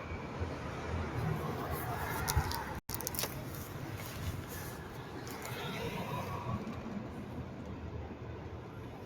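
A recording of everyday sounds runs through a noise suppressor applied to music or sounds. The speech-tuned processing treats sustained tones and ambience as noise and pulls them down by roughly 5 dB, so attacks pass while tails sink and the level pumps. On a spectrogram, decays and the background floor look chopped and fluctuating rather than smoothly fading. From 2.79 to 2.89 s the audio drops to silence for about 100 ms and then resumes, likely a Bluetooth stall where the headphone buffer ran dry waiting for delayed packets. The waveform shows a flat gap, and the spectrogram a clean vertical blank band.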